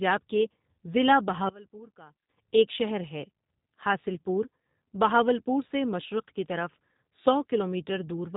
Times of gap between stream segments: none

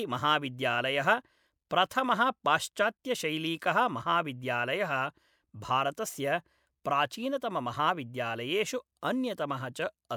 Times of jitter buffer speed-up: none

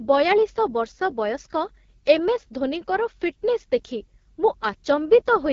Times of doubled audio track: none

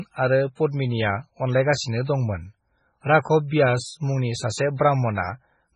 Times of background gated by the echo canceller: none

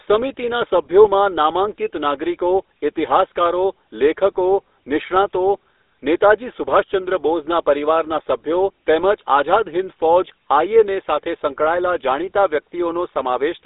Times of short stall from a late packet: none

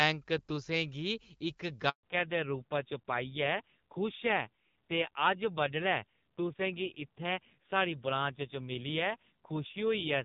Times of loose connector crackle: none

